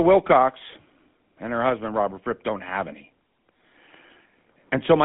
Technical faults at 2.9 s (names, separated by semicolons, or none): GSM full-rate codec